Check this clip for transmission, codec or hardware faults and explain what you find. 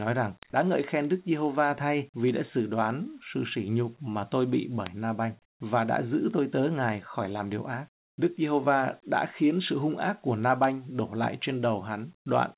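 Two faults run through this speech clip, which also lacks anything above 4 kHz, as a narrowband call path would.

Word clock ticks run from 0.12 s to the end, roughly every 0.1 s. A receiver clock about 200 ppm adrift slips one sample per cycle. Their strict regularity sets them apart from random dropout clicks.

Comfort noise in place of the background fills 7.94 to 8.18 s, 240 ms. The room tone, about 59 dB below the loudest sound, becomes a steady, featureless hiss at the same level. This is likely discontinuous transmission's synthetic fill, not a gate, because nothing falls silent.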